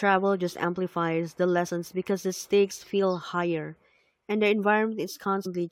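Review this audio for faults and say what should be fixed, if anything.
Compressed frames skipped at 1.66 s, between "just amplifies the" and "because the stakes feel", and again at 5.45 s. Roughly 50 ms of speech vanishes at the first point and about 100 ms at the second, as whole compressed frames go missing and playback jumps forward. Unlike a dropout, no silent gap is inserted. To prevent it, check file integrity after transfer and use error-resilient streaming or retransmission so damaged frames are replaced rather than discarded.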